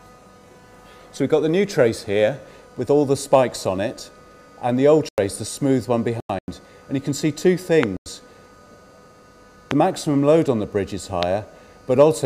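Compressed frames arrived corrupted and the decoder rejected them, so the player substituted silence. The sound cuts out abruptly from 5.09 to 5.18 s, from 6.13 to 6.48 s and from 7.97 to 8.06 s. The two shorter holes each fit two frames of about 48 ms, and the longer one fits five. These are corrupt frames muted, and timing holds throughout.

A voltage transient, likely from a plug, switch, static discharge or driver glitch, was added to the signal. It produces a single loud pop about 15 dB above the sound at 7.83 to 7.85 s, 9.71 to 9.73 s and 11.23 to 11.25 s, with the sound continuing underneath.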